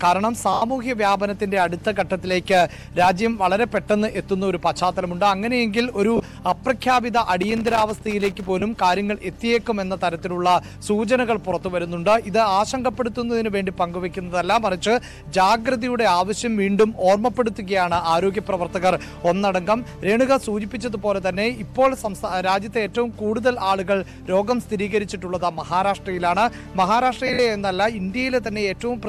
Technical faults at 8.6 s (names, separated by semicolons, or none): lost LE Audio frames